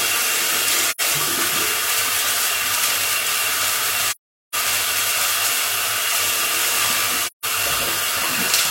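Soft-edged gaps fade the sound out and back in at 0.89–1.01 s, 4.08–4.55 s and 7.25–7.45 s. This is AAC frame loss with muting: the decoder zeroed missing frames, and overlapping windows smoothed the edges. The gap lengths fit roughly two, ten and four frames.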